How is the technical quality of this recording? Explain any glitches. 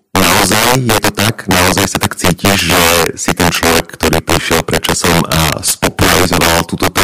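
Technical quality is poor because of integer overflow, present throughout the speech. The signal is driven about 8 dB past full scale, and instead of being limited, samples beyond the largest integer value wrap around to the opposite sign. Roughly one sample in fourteen exceeds the limit, so each peak over the limit jumps across the entire range. The result is violent, sharp cracks on louder passages, far harsher than ordinary clipping distortion.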